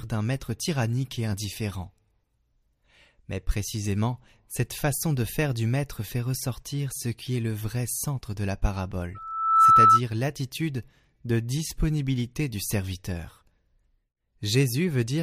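At 9.15 s, just after "vrai centre de la", a loudspeaker feedback squeal starts. The microphone is picking up the loudspeaker it feeds. At 1.3 kHz the loop gain goes above one, so that tone keeps amplifying itself. It swells over about half a second into a piercing whistle, about 15 dB louder than the speech. The squeal cuts off at 10.01 s, before "l'attitude de disponibilité du".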